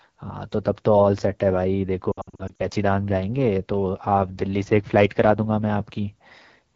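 The whole clip runs through the AMR wideband (HD Voice) codec, and the speech sounds rough and raspy throughout, which fits one of its lowest rates, around 8.85 kbit/s. From 2.11 to 2.62 s there are lost AMR speech frames scattered through about half a second, roughly 260 ms missing in all. The decoder keeps guessing from the last good frame, so the speech warbles and dips, with gaps up to 60 ms.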